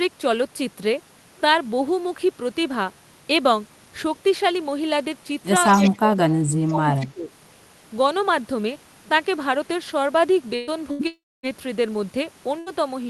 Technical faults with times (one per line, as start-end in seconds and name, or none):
5.67-5.91 echo leak
5.69-7.30 speech suppressed in double talk
6.95-7.06 echo leak
10.55-11.02 burst of packet loss
11.07-11.46 long network dropout
12.59-12.69 burst of packet loss